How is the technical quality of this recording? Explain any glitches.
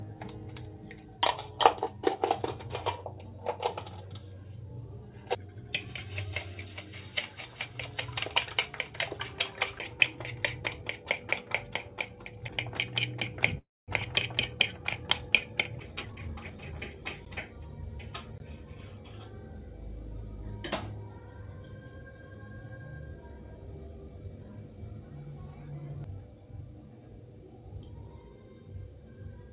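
The recording has two timing glitches, and the whole clip is band-limited, with nothing above 4 kHz, which fits a narrowband G.711 A-law call path.

Call audio freeze, 13.58 to 13.90 s: packets were likely delayed in transit and the jitter buffer ran dry. The receiver stretched the last sound into a brief fading fill, then about 220 ms of silence. When playback resumed, nothing was lost, but everything after shifted roughly 0.3 s later.

Jitter buffer speed-up, 15.98 to 16.94 s: the receiver now held more audio than it wanted and drained the excess by cutting many tiny pitch-period slices, removing roughly 0.3 s in total. The sound runs at about 129% speed while the pitch stays the same, so it sounds hurried.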